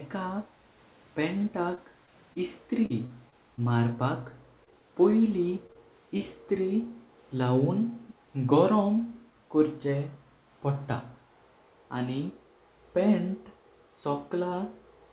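From 1.38 to 3.60 s there is repeated packet loss, heard as robotic sound. Nine gaps arrive in quick succession. The longest is 41 ms. About 160 ms of audio goes missing, and the receiver covers it by stretching the last good sound for 197 ms in total. That concealment fills about 9% of the stretch. The repeated patches give the speech a choppy, buzzy, mechanical edge.

Scattered short gaps follow from 4.32 to 6.22 s. There are about seven of them, spread out rather than bunched. Each is short, at most around 20 ms. Some 80 ms is lost, roughly a tenth of a second is filled by extending the previous sound, and 25 ms is added. The speech stays clear but catches briefly with small ticks and smears.

At 8.09 to 8.14 s a faint, delayed copy of the speech appears for about 50 ms. It trails the original by 297 ms and sits far below it, roughly 25 dB down. This is likely an echo leak: a loudspeaker's output reached a microphone, and the echo canceller let a remnant through. 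The whole clip has nothing above 4 kHz, which fits a narrowband G.711 call path.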